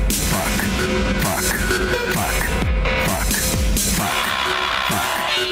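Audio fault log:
2.02 s to the end: adaptive stream at a lower bitrate. The connection slowed, so playback switched to a cheaper encoding, consistent with Opus stepping from 64 to 32 kbit/s, and codec artefacts rise abruptly. The spectrogram shows a sudden texture change at 2.02 s; the waveform shows no gap.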